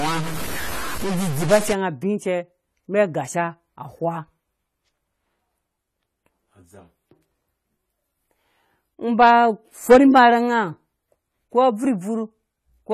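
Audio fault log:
throughout: AAC compression. The speech sounds dull and smeared. There is no content above 13.9 kHz, and the damage is plainly audible, with a warbling, fizzy texture on sustained sounds and sibilants. The likely cause is a low-bitrate AAC-LC encode, which fits about 32 kbps. At that rate the encoder lowers its cut-off and quantises the remaining spectrum coarsely against its hearing model, so bands are thinned out or blurred over time and detail is lost.
0.00 to 1.73 s: stuck bit. This opening stretch, ending just before "nga bi", carries distortion that follows the waveform. The likely cause is one data bit held at a fixed value by a faulty line or converter. About half of the samples are then wrong by that bit's weight. Because the bit also flips with the sign of small values, the quieter moments fill with noise instead of falling silent.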